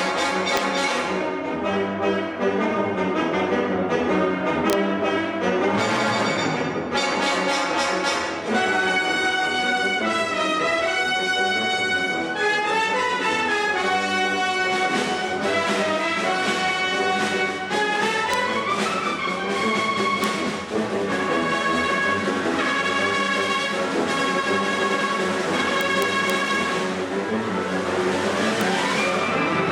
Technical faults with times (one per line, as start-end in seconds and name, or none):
0.57 integer overflow
4.70-4.73 integer overflow
18.34 integer overflow
20.24 integer overflow
25.81-26.30 integer overflow
28.61 integer overflow